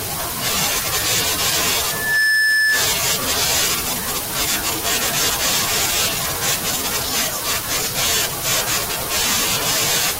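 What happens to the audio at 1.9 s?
Loudspeaker feedback squeal from 1.85 to 2.91 s: the mic–speaker loop howls at 1.7 kHz, swelling quickly above the speech, a bright horizontal spectrogram line.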